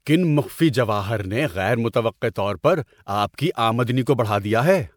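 Throughout, the speech sounds swirly, hollow and smeared, with blurred consonant attacks. This is likely generation loss: MP3 encoding repeated about three times, at what fits 128 kbit/s, each pass adding fresh quantisation. A spectrogram shows patchy holes and nothing above 20.9 kHz.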